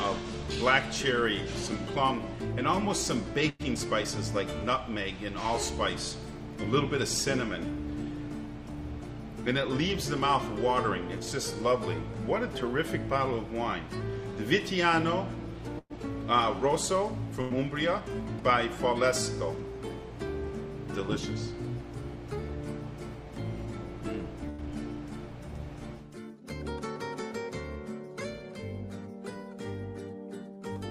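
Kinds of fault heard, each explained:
Burst of packet loss: A short run of audio never arrived in time, so the receiver stretched the last sound and let it fade before picking up again further on. It happens at 3.49, 15.79, 17.41 and 24.50 s. Each gap is covered for roughly 90 to 110 ms while 60 ms of real audio is gone, which leaves the playback lagging a little, except at 24.50 s where that extra delay is trimmed back out. At 15.79 s the fade runs out into about 30 ms of silence.
Jitter buffer speed-up: After a loss the buffer is holding more delay than it wants, so it shaves out tiny pitch-period slices to catch up. The pitch stays put but the audio briefly sounds rushed. You hear it from 3.74 to 4.06 s, running at about 111% speed and trimming around 50 ms. It happens again from 15.93 to 16.15 s, running at about 115% speed and trimming around 40 ms, right after the dropouts just before each.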